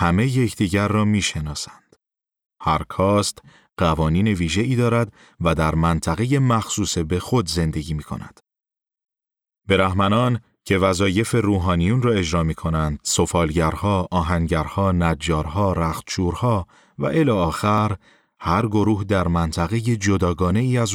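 A jump in the speech at 14.07 s, then a similar one at 17.78 s, skipping about 10 ms and 20 ms respectively, likely dropped buffers (overrun) joining the audio directly across the gap.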